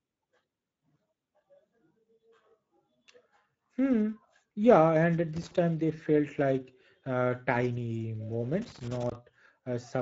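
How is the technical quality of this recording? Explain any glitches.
The speech carries audible Speex codec damage from start to finish, plus two bursts of loose connector crackle.

The Speex codec degradation runs throughout. The codec has too few bits to model the excitation. The speech sounds plainly hoarse and noisy. Nothing lies above 7.7 kHz, and the top band is a noise-like fill. This fits a rate near 16.8 kbps.

Loose connector crackle appears from 5.37 to 5.58 s and from 8.62 to 9.15 s. A worn contact makes and breaks as it shifts. This chops the signal on and off. Each burst is heard as irregular scratching and crackle.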